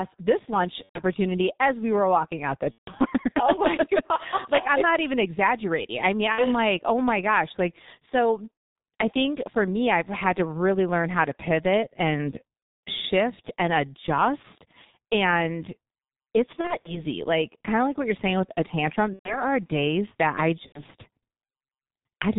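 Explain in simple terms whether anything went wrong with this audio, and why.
Yes, two things went wrong. The whole recording passed through the G.723.1 codec, an old internet-phone method that squeezes speech very hard, chops it into short chunks and throws away everything above 4 kHz. Here the squeezing is heavy, so the speech sounds muffled and rough throughout. The crisp edges of consonants get smeared, and the voice has a hoarse quality that never goes away.

On top of that, there is VoIP packet loss concealed by the speech codec. Chunks of the call went missing on the network, and the decoder filled each gap by guessing, repeating its last bit of voice while fading it down. You hear brief buzzy or blurred stretches, and the voice stays weak for a moment after each gap. These happen at 0.83, 2.72, 6.32, 8.54 (just before "I think for me"), 12.76 (between "how to pivot and" and "shift and adjust"), around 16.6 to 17.1 as several small dropouts, 19.13 (between "you're saying with a" and "are days that I") and 20.66 seconds. 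The longest gaps last about a quarter of a second.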